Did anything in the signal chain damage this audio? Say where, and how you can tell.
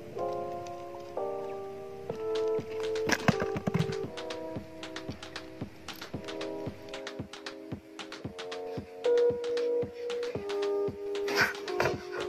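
Yes. From 4.08 s to the end the sound drops about 1.5 semitones and slows to 0.919 times its speed, pitch and tempo shifting together. That is a wrong sample rate at playback, consistent with 48 kHz material being clocked out at 44.1 kHz without conversion.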